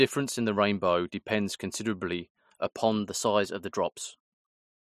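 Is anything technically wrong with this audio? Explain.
Yes. From 2.81 s to the end of the clip, the speech suddenly runs about 5.3% faster and sits about 89 cents higher, just under a semitone. This is likely a drift correction step, where clock-matching software changes the playback rate in a single jump to drain or refill its buffer. Speed and pitch move together and stay fixed at the new rate rather than wavering, which distinguishes it from wow or flutter. The clip ends before any return to normal speed.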